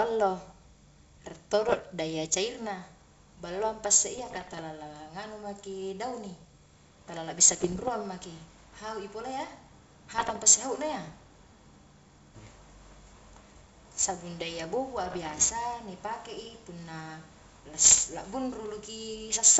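A speech recording carried over a G.722 wideband link, with the sound extending up to about 7 kHz. It is broken by short pops and rough, gritty bursts with brief jumps in level at 1.69–1.80 s, 4.18–4.61 s, 7.48–7.90 s, 10.18–10.42 s, 14.97–15.43 s and 17.84–17.99 s. These are bit errors on an ADPCM link, at rates of roughly 0.5 to 1.5 percent. Each flipped bit throws off the decoder's step size and predictor, so the damage rings on for some milliseconds.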